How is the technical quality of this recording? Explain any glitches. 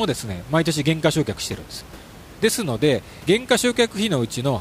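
The recording has no technical glitches, and the only thing beyond the speech is the room's own background noise, sitting about 21 dB below it.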